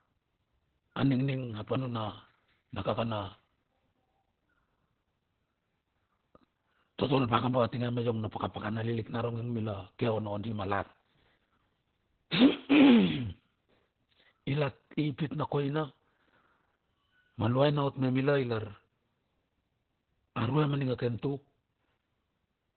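Throughout, heavy Opus voice compression leaves speech muffled and hoarse, fitting a narrowband SILK stream near 8 kbps. A spectrogram shows nothing above 4.3 kHz.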